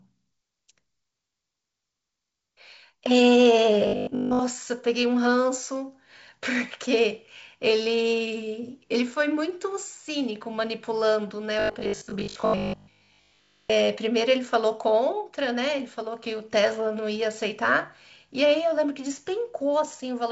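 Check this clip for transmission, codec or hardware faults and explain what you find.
Two stretches of robotic sound from repeated short buffers turn up, at 3.87 to 4.41 s and again at 11.60 to 13.72 s. In both, the speech collapses into a stiff, metallic buzz pitched at 50 Hz that still roughly tracks the talking. The likely cause is new audio arriving too late, so playback keeps looping a 20 ms chunk and most of the real signal gets skipped. That 20 ms loop is what pins the pitch at 50 Hz. The wideband telephone coding underneath, with nothing above about 7 kHz, isn't part of the problem.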